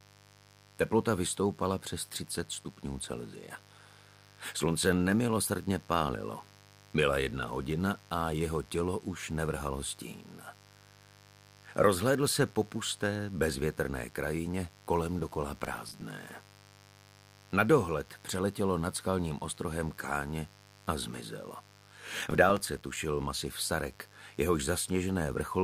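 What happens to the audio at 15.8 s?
The processor fell behind on its tiny audio buffers from 15.65 to 16.01 s, leaving short silent gaps that fit buffers of a few milliseconds: processor overload crackle, a gritty tearing burst. Underneath, stray 50 Hz mains switching spikes leak into the path as mains buzz, a steady raspy hum roughly 25 dB below the sound.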